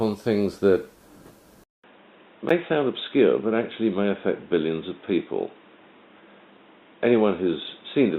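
At 1.64 s the sound drops out for 200 ms and returns dull and boxy, with nothing above 3.8 kHz and a new noise floor roughly 35 dB down, at much the same level. The likely cause is an input switched to a poorer device, with a narrower band and noisier front end.

At 2.49 s, a gap between stream segments leaves an 11 ms hard-edged hole of silence. Two segments' time stamps fail to line up, which fits 1-second segments, and the player pads the difference with silence rather than losing audio.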